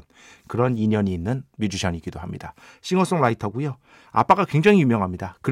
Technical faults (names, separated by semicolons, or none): none